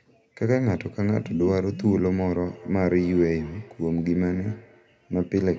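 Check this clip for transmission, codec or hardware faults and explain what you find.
One fault is present: a feedback echo between two devices, from 2.46 s to the end. Another device in the room replays this microphone's audio, which the local echo canceller cannot remove. The speech returns roughly every fifth of a second, thin and ringing, about 20 dB below the direct speech.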